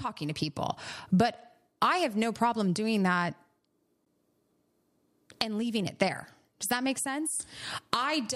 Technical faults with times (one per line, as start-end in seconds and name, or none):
4.05 gap at a join of encoded pieces